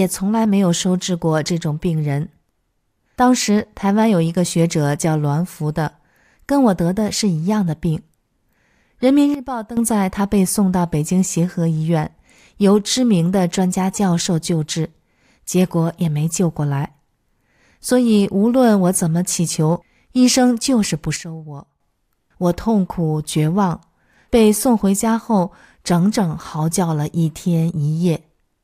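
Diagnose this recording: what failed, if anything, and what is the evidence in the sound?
A sudden gain jump occurs twice, most likely a digital gain setting switched in and out without a ramp, so the level changes from one sample to the next. From 9.34 to 9.77 s and again from 21.16 to 21.80 s, the speech drops by about 12 dB and the background noise drops with it, then both return abruptly. Because the noise floor follows the speech, the change came from gain in the signal path, not from the talker.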